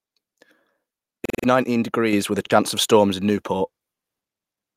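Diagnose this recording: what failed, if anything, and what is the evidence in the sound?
Repeated buffer at 1.25 to 1.44 s and again at 2.46 to 2.51 s, a driver or buffer failure. At 1.25 s a single 46 ms slice of speech sounds five times in a row, each repeat butting against the last with a hard join, giving an audible stutter. Roughly 200 ms of real audio is missing there. At 2.46 s the same slice length plays twice, a brief hiccup losing about 50 ms. When fresh samples failed to arrive, the device replayed its last block. The 46 ms repeat length fits a 2048-sample buffer.

Microphone volume stepped up at 2.13 s, in call processing. The speech and the background noise rise together by about 5 dB in a single step, within roughly 10 ms, with no gradual ramp. Because both rise by the same amount, the change happened before any separation of voice from noise. The call software's input gain control judged the microphone too quiet and raised the device's capture level in one increment.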